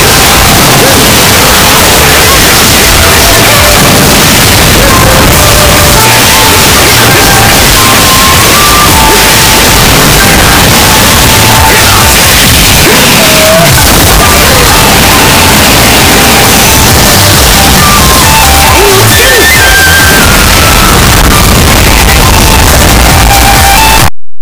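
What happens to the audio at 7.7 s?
At 7.7 s you're hearing the same thing as everywhere else: loud, harsh, buzzy distortion with quiet moments as loud as strong ones. That's likely signed and unsigned mixed up on the 8-bit samples, so the top bit flips and every zero crossing jumps across the whole range.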